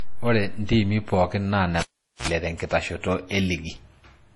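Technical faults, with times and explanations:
Throughout, transcoding between lossy codecs: the speech carries two layers of compression smear at once, the swirly, watery texture of a very low-bitrate first pass, around 32 kbit/s MP3, re-encoded by what sounds like WMA. Nothing survives above 11.4 kHz, since the lowest cut-off sticks. Likely cause is a chain of lossy re-encodes.
1.81 to 2.28 s, cable pulled and plugged in: a pop, then roughly 0.42 s of near silence while the lead is out, a short burst of 60 Hz mains buzz lasting about 53 ms as only the tip makes contact, then a second pop as the sound snaps back.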